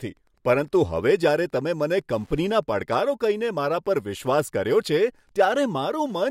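Throughout the speech runs Wi-Fi interference: a faint, steady ticking every 102.4 ms, nearly ten per second, far below the speech level. A nearby radio's beacon is being rectified by the audio circuit. Its slow, regular tick sets it apart from mobile-phone buzz.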